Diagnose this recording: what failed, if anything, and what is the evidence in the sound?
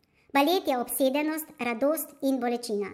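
Speech runs hurried and high throughout, 1.38 times fast and 5.55 semitones up: wrong sample rate at playback, fitting 32 kHz audio played at 44.1 kHz.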